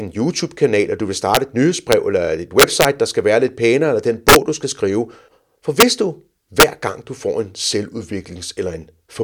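Speech, with integer overflow cracking on the loud peaks at 1.35–1.37 s, 1.92 s, 2.60–2.85 s, 4.29–4.36 s, 5.80–5.83 s and 6.60–6.63 s. Peaks about 1 to 6 dB over full scale wrap to the opposite sign instead of limiting, and the long 2.6 s burst is the nastiest.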